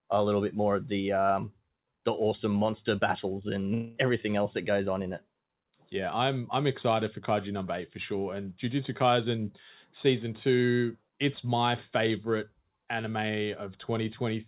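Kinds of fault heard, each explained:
Long network dropout: after "awesome monster battles and", a buzzy continuation of the last sound stands in for about 0.22 s, likely from lost packets, unlike a brief glitch, before "everything else that goes".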